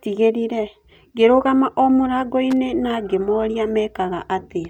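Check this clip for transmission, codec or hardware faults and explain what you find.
One hardware fault is present. Loose connector crackle at 2.51 to 2.53 s: a worn contact briefly breaking and remaking chops the speech signal, producing a short, irregular scratchy crackle.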